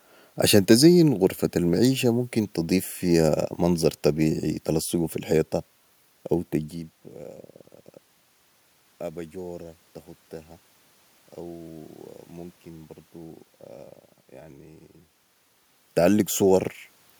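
A speech recording with no technical faults to report. Room noise sits underneath it, and the level shifts at around 6.5 and 15.5 seconds as the talker moves relative to the microphone.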